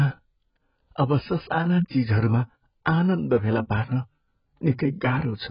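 Heavy AAC compression at a very low bitrate is the likely cause of the damage that runs through the whole speech clip. Starved of bits, the encoder has discarded the upper spectrum and quantised what remains coarsely, so nothing is left above about 5.1 kHz. The sound is dull and muffled, with smeared consonants and a warbling, fizzy texture on sibilants and held vowels. The damage is heavy enough to fit a rate near 12 kbps.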